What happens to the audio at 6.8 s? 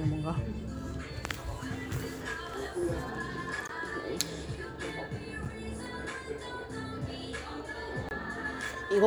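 Nothing goes wrong at 6.8 s; the audio plays through that moment intact, with no dropout, click or other fault.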